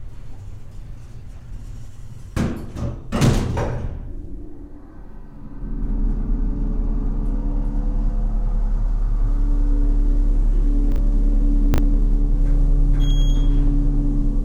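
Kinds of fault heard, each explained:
Chunks out of order: a 20 ms block of audio was delivered or written late and played after the blocks meant to follow it, two blocks late at 10.92 s and one late at 11.74 s, so each moment sounds briefly jumbled.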